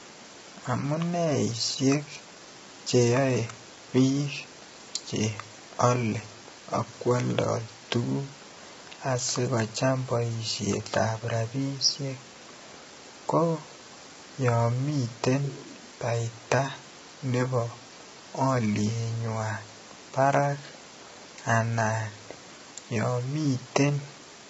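From start to finish, the speech has likely passed through low-delay AAC compression, the AAC-ELD format used for video calls, at a bitrate low enough to cause heavy damage, which fits roughly 16 kbps. With so few bits, it cannot code the pitch harmonics cleanly, so noise fills the gaps between them and the voice sounds rough and grainy. Nothing survives above 7.8 kHz, leaving the top end dull and cut off.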